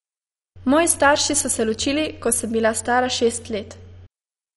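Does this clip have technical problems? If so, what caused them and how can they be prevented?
Yes. Throughout the speech the sound is dull and carries a gurgling, granular roughness, and nothing is heard above about 11.3 kHz. The likely cause is MP2 compression at a low rate, which fits roughly 48 kbps. Too few bits reach the 32 sub-bands, so upper bands flicker on and off and the rest are coarsely quantised. Unlike a plain low-pass filter, it has a flickering, watery grit. To prevent it, encode at a higher bitrate or use a more efficient codec.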